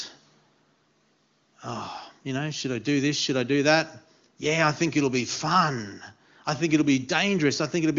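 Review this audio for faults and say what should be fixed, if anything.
Nothing here needs fixing: the speech has gone through the AMR wideband (HD Voice) codec at its highest rate, 23.85 kbit/s, and at that rate any effect of the coding on the signal is faint at most.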